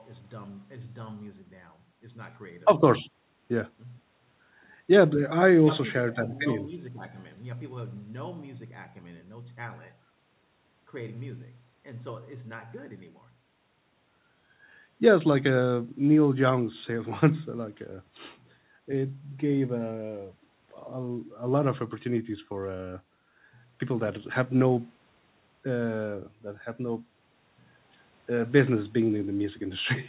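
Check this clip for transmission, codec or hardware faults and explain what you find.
No faults turn up when checking this clip.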